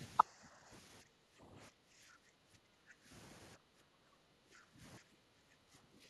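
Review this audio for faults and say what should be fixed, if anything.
Background gated by the echo canceller at 0.28–0.7 s, 1.03–3.09 s, 3.57–4.8 s and 5.0–6.01 s: while far-end playback was active, the canceller pulled the microphone down by about 9 to 15 dB, so the room sound behind the speech sinks away and returns once it releases. Prevent it by tuning the canceller's residual suppression to be gentler, or by adding comfort noise so the background stays steady during playback.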